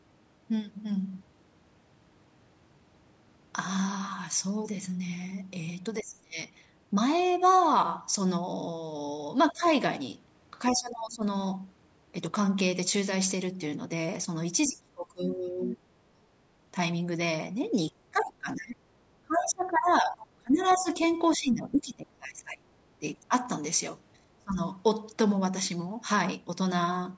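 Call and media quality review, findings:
Speech suppressed in double talk: talker's level dips sharply, up to about 25 to 30 dB, with partial cut-outs at 6.02–6.37 s, 9.52–9.64 s, 10.72–11.23 s, 14.68–16.21 s, 17.91–23.33 s and 24.2–24.59 s. Likely echo canceller or suppressor. Overlapping far-end signal makes near-end speech indistinguishable from loudspeaker echo, so gain is pulled down on both. Longest stretch is 17.91–23.33 s, with roughly 3 s of it attenuated. Shallowest dip at 9.52 s, about 15 dB.

Other side's voice leaking through: faint second voice under the talker, a brief scrap at 9.66–9.7 s, about 30 dB down, and a longer patch at 20.7–21.35 s, about 20 dB down. Likely residual echo from the loudspeaker path. Canceller doesn't fully subtract playback picked up by the mic. Both instances sit inside or beside suppression windows, consistent with the canceller losing convergence during double talk.

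Dropped samples: single sharp click at 23.46 s, with a thin vertical line across the spectrum. Likely a capture or transport glitch discarding a fraction of a millisecond of audio. Waveform steps from one value to a later one, producing a broadband transient with no audible gap. Isolated event, just after the long suppression window ends. Mic-path band limit, nothing above 8 kHz, is expected call processing.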